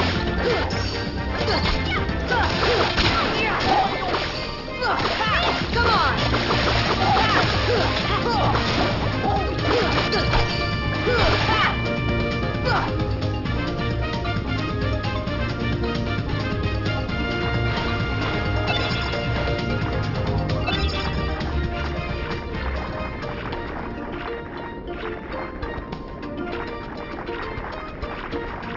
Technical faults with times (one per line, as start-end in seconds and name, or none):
0.00-28.77 aliasing